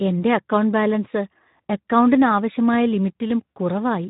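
Speex codec damage runs through the whole speech clip: nothing reaches above 3.8 kHz, and the voice sounds noisy and hoarse because the excitation gets too few bits. The audible coarseness fits a low-rate setting near 11 kbps.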